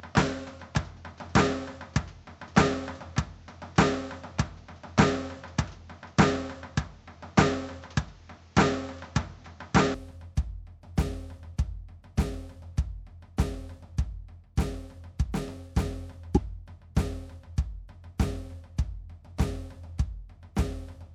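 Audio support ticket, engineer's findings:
Input switched to a poorer device, likely: music dull and band-limited 0.0–9.94 s, nothing above 7.7 kHz, different faint noise floor, level a few dB off. Clears abruptly at 9.94 s with no gap. A separate noise bed and level jump distinguish it from a simple EQ change.

Corrupt frame decoded: brief burst at 16.35–16.37 s, roughly one frame long, peaking near -10 dBFS. The decoder misread the gains or codes and put energy at the wrong frequencies. This is misplaced content, not a silent dropout.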